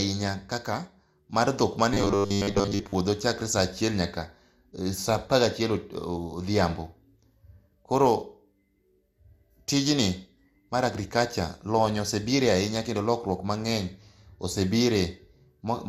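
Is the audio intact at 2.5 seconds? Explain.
No. From 1.94 to 2.95 s, just after "mar dhok", new audio is likely arriving too seldom, so the playback software keeps looping the last 10 ms while most of the real signal in that stretch is skipped. That fixed 10 ms repeat imposes a 100 Hz pitch, which is the robotic sound from repeated short buffers: a rigid, metallic buzz that only loosely tracks the speech.

Generation loss is also present at 2.5 s, as it is across the whole clip. The audio has likely been through MP2 at 96 kbit/s around five times. Each decode and re-encode quantises on a shifted frame grid, so noise and spectral gaps pile up with every pass. The sound is swirly, smeared and hollow, with blurred attacks.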